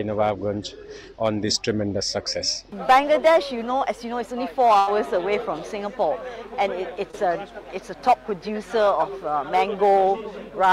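At 4.79 s a burst of packet loss removes about 80 ms of audio. The receiver extends the last sound for roughly 76 ms and fades it, so a held buzz or dying hiss fills the hole, and playback resumes at 4.89 s with that stretch gone.

From 7.11 to 7.15 s a short concealed packet loss drops about 20 ms. The decoder continues the preceding sound for roughly 23 ms and then blends back into the real signal, leaving a brief smear or wobble where a short sound may have disappeared.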